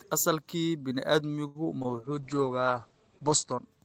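A short stall from a late packet at 1.47 to 1.57 s holds the speech for 77 ms while the jitter buffer waits, then resumes with nothing lost. Two short concealed packet losses follow, at 1.79 to 1.87 s and 1.83 to 1.86 s: about 20 ms each is lost, bridged by extrapolated sound, giving a brief smear. A call bitrate drop from 40 to 11 kbps lasts from 1.90 to 3.73 s, with audio bandwidth falling from 20 kHz to 8 kHz, so the speech turns coarse and muffled.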